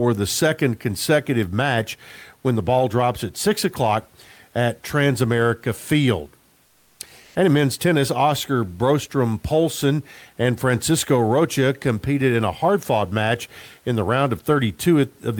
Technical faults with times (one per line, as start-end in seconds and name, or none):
6.65-7.35 comfort noise in place of the background